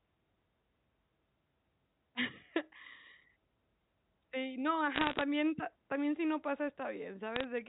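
From 4.96 to 5.22 s, just before "pa también si no", and again from 7.36 to 7.44 s, bit errors on a digital phone line, about one percent, then half a percent, corrupt single mu-law samples into sharp crackling ticks over intact speech, unlike packet loss, which leaves gaps.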